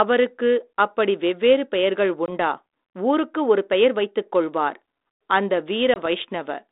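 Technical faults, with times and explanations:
2.26–2.29 s and 5.94–6.07 s, packet loss on an ADPCM call: about one packet, some 20 ms, drops out as a hard-edged silent gap each time. On this 32 kbit/s G.726 line, the decoder's adaptive predictor and step size lose track of the sender's, so the speech returns with brief distortion before settling.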